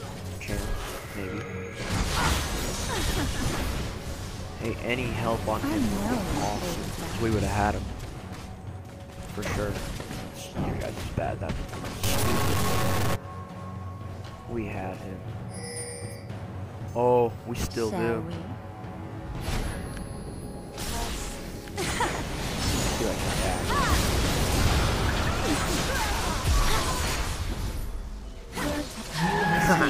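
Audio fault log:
12.04–13.15 s, stuck bit: one data bit, likely held fixed by a failing line or converter, shifts about half the samples by a step near -20 dBFS in a waveform-driven pattern, giving harsh, buzzy distortion and noise in quiet stretches.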